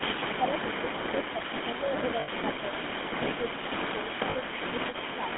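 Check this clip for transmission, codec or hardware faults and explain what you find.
Yes, there's quite a bit going on: a codec colouring the whole call, two stretches where the talker gets pushed down, a leaking echo, and two short dropouts.

All the way through, the GSM full-rate codec is plainly audible. The band runs from roughly 200 Hz to 3.5 kHz, and the buzzy, gravelly roughness points to that old 13 kbps coder. Its pulse-driven excitation model can't follow the voice smoothly, so everything sounds grainy.

From 0.37 to 0.53 s, and again from 0.96 to 1.92 s, the level sags by around 10 dB in patches, about a tenth of a second at first and about 0.4 s later. That's most likely speech suppressed in double talk. With both ends talking, the echo canceller couldn't separate its own talker from the loudspeaker echo, so it turned both down.

Between 0.42 and 3.71 s there's a repeat of the voice trailing 267 ms behind, sitting about 10 dB under the main signal. 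That's likely an echo leak. A loudspeaker at one end fed the microphone, and the canceller didn't catch all of it, so a delayed copy got sent back.

At 2.2 to 2.29 s, and briefly at 4.30 to 4.36 s, the sound freezes into a rough, metallic ring before recovering. Those are lost GSM frames. The decoder held the last good frame and repeated it, and the dropout lengths fit a few 20 ms frames each.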